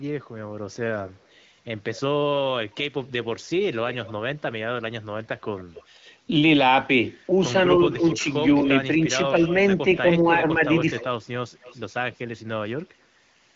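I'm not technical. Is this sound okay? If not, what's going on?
No. On the far end, a loudspeaker's sound likely leaked back into the microphone because the echo canceller didn't fully remove it. This echo leak adds a faint copy of the speech about a quarter second late, from 0.98 to 4.12 s, 5.57 to 5.84 s, 7.92 to 9.98 s and 10.95 to 12.21 s.

When both sides talked at once, the echo canceller likely couldn't tell the talker from the echo and turned the audio down. This speech suppressed in double talk causes brief dips in loudness between 7.86 and 9.03 s, and a deeper one between 10.38 and 11.0 s.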